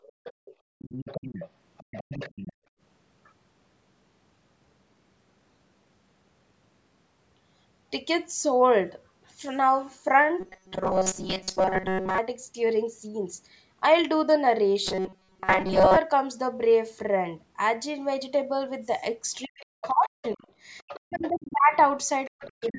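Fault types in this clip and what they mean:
background gated by the echo canceller: The room background dips sharply over the first 0.8 s and again from 2.53 to 2.80 s, falling by up to about 40 dB. The echo canceller clamped the microphone down while the loudspeaker was playing, then released it.
other side's voice leaking through: A second, fainter voice sits well below the main talker from the start to about 2.5 s, from 19.43 to 21.54 s, and in the final half second. The likely cause is loudspeaker sound the echo canceller failed to remove from the microphone.
robotic sound from repeated short buffers: From 10.40 to 12.18 s and from 14.85 to 15.98 s the sound becomes a rigid, metallic buzz at 188 Hz. This fits a buffer of about 5.3 ms being likely replayed over and over, while most of the real audio is skipped.
speech suppressed in double talk: From 19.46 to 21.73 s and again at the very end, the main voice dips, very deeply, while the other side is also speaking. 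The echo canceller likely could not separate the two and turned both down.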